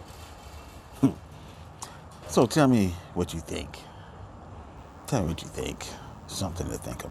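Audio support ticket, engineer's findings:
DECT cordless phone buzz from 4.77 s to end. Steady, thin buzz at 100 Hz with dense harmonics, faint, roughly 40 dB under the signal. Nearby DECT handset or base bursting every 10 ms. Audio circuit rectifying the RF.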